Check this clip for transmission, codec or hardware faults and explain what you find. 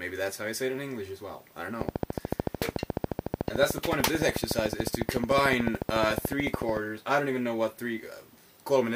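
There's one fault here, a train of clicks running from 1.81 s to 6.78 s. For about five seconds a short pulse repeats at a steady 13.7 per second, around seventy clicks in all, each much the same shape and peaking something like 20 dB above the sound. That regular, identical pulse most likely comes from interference from nearby equipment or a faulty connection or power supply. You hear it as a fast, even ticking over everything, pauses included.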